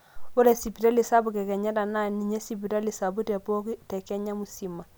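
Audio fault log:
No audible faults found.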